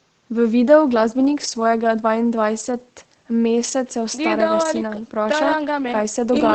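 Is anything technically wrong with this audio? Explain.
No, nothing is technically wrong with this speech: it carries the ordinary character of a call path, with high frequencies rolled off around 8 kHz and the coding texture expected from a codec like Opus at a modest bitrate.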